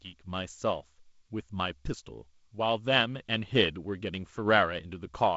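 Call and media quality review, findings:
Nothing to flag here: the speech comes through G.722 wideband coding at what sounds like 48 kbit/s, with the audio topping out at 7.7 kHz, the light hiss that coding leaves behind, and a somewhat noisier lower band at this rate.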